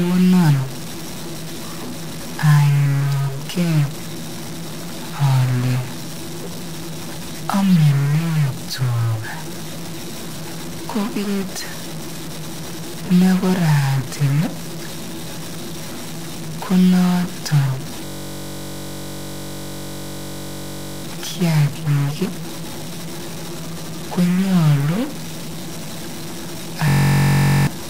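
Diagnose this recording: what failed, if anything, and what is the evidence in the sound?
A distortion runs through the whole speech recording, and the pauses between phrases are filled with a gritty noise rather than silence. That points to a stuck bit, most likely a data line or converter bit held at a fixed value. Clipping only distorts loud peaks, but here the quiet passages are damaged too. The error follows the waveform's sign and values, not its level.

From 18.05 to 21.04 s, and again from 26.88 to 27.67 s, the sound becomes a steady buzz at about 46.9 Hz. This is a system hang loop at the driver or buffer stage. The host stalled while the hardware kept replaying one 21.33 ms slice, which fits a 1024-sample buffer. About 3 s of audio is lost in the first loop and under a second in the second. A codec's packet-loss concealment fades and varies, but these repeats are identical and perfectly periodic.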